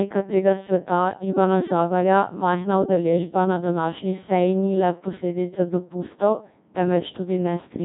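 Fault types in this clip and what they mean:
Codec 2 vocoder: Present throughout. The decoder rebuilds the speech from sine waves using only pitch, voicing, energy and a coarse spectral envelope, leaving heavy robotic, buzzy damage with nothing above 3.8 kHz, which fits a 1.6 kbit/s mode.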